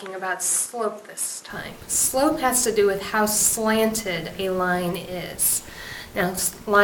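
From the start to 1.5 s the sound is duller, a little quieter, and carries faint added noise well below the signal. At 1.5 s it clears and fills out with no gap. This is likely an input switched to a poorer device, which was then switched back. On a spectrogram, nothing appears above 12.1 kHz before 1.5 s and full-band energy begins there. The waveform shows a modest level step at the same point.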